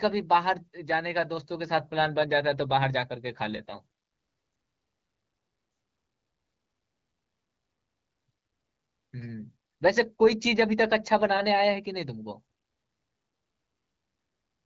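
No technical faults are audible in this speech, which carries only the light coloration expected from the AMR wideband (HD Voice) codec.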